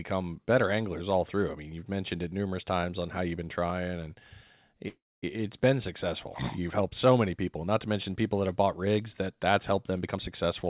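A call audio freeze from 4.88 to 5.38 s interrupts this speech recording, just before "been successful". Packets were likely held up in transit, so the jitter buffer ran dry. The receiver stretched the last sound into a fading buzz or hiss, then about 230 ms of silence, before resuming where it stopped. This inserts roughly 344 ms of delay while losing nothing. A jitter buffer speed-up follows from 10.01 to 10.65 s, right after "that that's helped them". Holding more audio than its target, the receiver trimmed pitch-period-sized slices repeatedly, about a tenth of a second in total. The speech runs at 118% speed with unchanged pitch, sounding hurried. The whole clip carries the narrowband G.711 mu-law coding of a call path, with nothing above 4 kHz.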